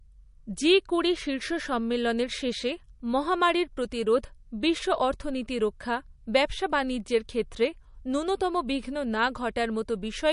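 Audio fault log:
throughout, MP3 compression: nothing above 10.6 kHz, with plainly audible watery, swirling damage that a simple low-pass filter lacks, likely from a low-bitrate MP3 around 40 kbps.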